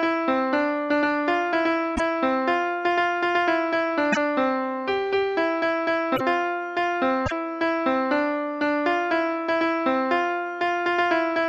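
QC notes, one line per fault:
1.95–7.32 s: broken MP3 bit reservoir. Short glitches of about 60 ms at 1.95, 4.12, 6.15 and 7.25 s. Likely dropped frames, so following frames decode wrong borrowed data.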